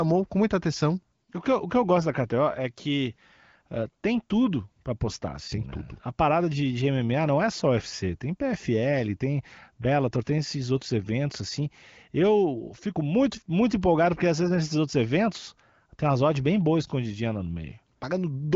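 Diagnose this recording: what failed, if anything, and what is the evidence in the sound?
Nothing failed in this recording.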